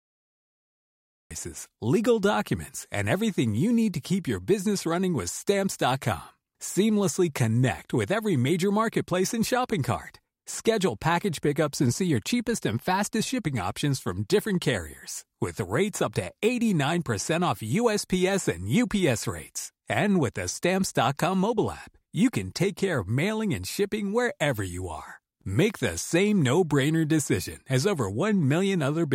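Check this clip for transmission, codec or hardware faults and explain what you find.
One fault is present: a cut-off start. The audio is digital silence from 0 to 1.31 s, then the speech enters abruptly mid-sound at 1.31 s with no attack or fade-in, because the recording or stream began after the speaker had already started.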